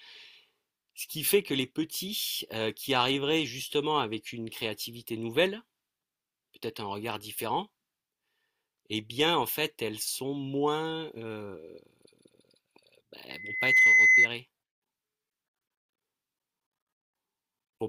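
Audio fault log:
13.30–14.29 s, loudspeaker feedback squeal: a single piercing tone at 2 kHz rises out of the speech, swelling over roughly half a second until it sits well above the voice, around 15 dB louder, then stops at 14.29 s. A microphone is hearing the loudspeaker it drives, and at 2 kHz the loop gain has crept above one, so that frequency feeds on itself and grows.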